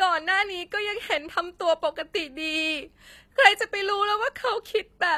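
Throughout, the treble sounds synthetic and s sounds turn gritty and lispy, likely HE-AAC compression at a low bitrate such as 24 kbps, rebuilding highs from copied lower bands.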